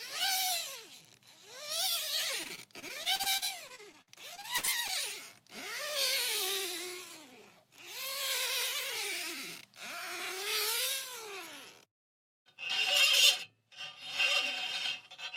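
From 2.43 s to 4.90 s there is repeated packet loss, with a robotic sound. Short holes keep appearing, the longest 60 ms. Each is patched by extending the sound just before it. Nearly a fifth of the stretch is filled this way, so it sounds choppy, with pieces missing.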